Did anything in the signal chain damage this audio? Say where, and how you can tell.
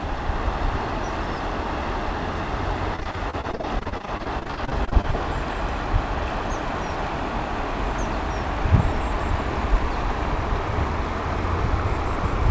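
Yes, the damage comes from the network stage of a call path. From 2.96 to 5.15 s there is repeated packet loss, giving a robotic sound. The audio turns choppy, with dozens of short holes, the longest about 42 ms. Each missing piece is patched by stretching the last sound, so about a quarter of that span is filler. The band stops at 8 kHz, which points to a wideband codec such as G.722.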